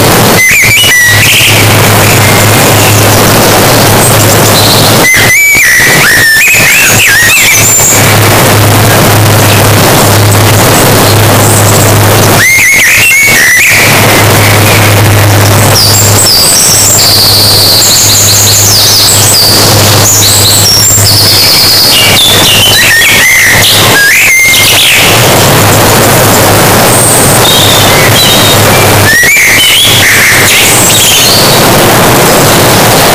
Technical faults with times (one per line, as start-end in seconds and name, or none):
0.00-33.15 float read as integer